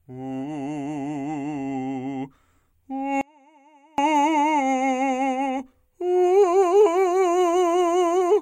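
At 3.21 s the music drops out abruptly, and it returns at 3.98 s. For those 0.77 s only a faint trace remains, roughly 35 dB down. This audio dropout to a faint residue likely came from a brief signal break while the path stayed live.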